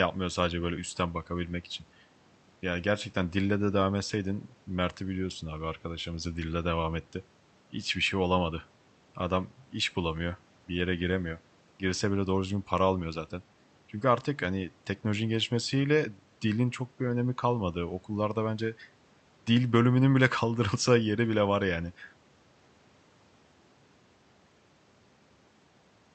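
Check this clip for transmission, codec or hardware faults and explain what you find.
Nothing wrong can be heard in the signal: the speech has the ordinary character of a call passed through the Opus codec, with its frequency range stopping at 8 kHz.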